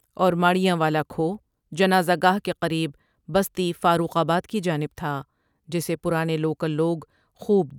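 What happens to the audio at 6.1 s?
Nothing goes wrong at 6.1 s; the speech there plays through intact, with no dropout, click, distortion or other fault.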